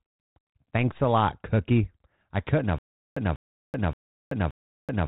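From 2.79 s to the end, a stutter with silent gaps: a 194 ms burst repeats four times every 574 ms with 380 ms of flat digital silence between, showing as identical repeated blocks separated by empty stretches on the waveform, likely from a stalled stream replaying its last fragment.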